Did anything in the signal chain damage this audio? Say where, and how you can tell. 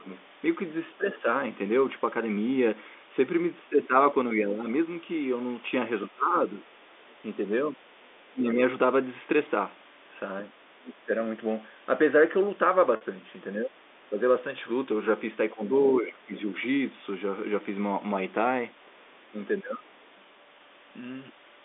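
Yes. At the call-processing stage, speech is suppressed in double talk between 0 and 19.9 s. The level dips by up to about 20 dB, roughly three seconds in total. The likely cause is the echo canceller turning both sides down.

Also at the call-processing stage, the other side's voice leaks through at 0.12, 7.09 and 10.84 s, and from 16.37 to 20.04 s. It sits about 25 dB down, and about 40 dB down at 7.09 s. This is likely echo the canceller left behind.

At the network stage, there is packet loss with pitch repetition from 12.96 to 13.01 s. A 50 ms gap is bridged by a repeated pitch period, heard as a brief held, buzzy tone.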